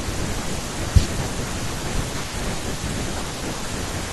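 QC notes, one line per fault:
3.19–3.21 s, compressed frames skipped: the speech lurches forward by about 20 ms, so a sliver of sound goes missing at the join. Whole frames of the compressed stream were never decoded, either because they were absent or because the decoder threw them out as corrupt. Playback jumps straight to the next good frame.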